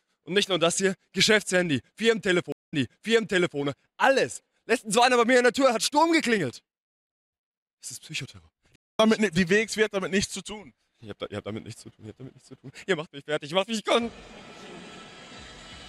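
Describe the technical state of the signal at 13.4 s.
At 13.4 s the signal is intact, with no dropout, clipping, distortion or other fault audible at that moment.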